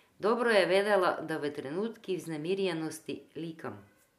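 No technical faults can be heard in this speech recording. Nothing at any point in the audio points to a problem in how it was captured, processed or delivered.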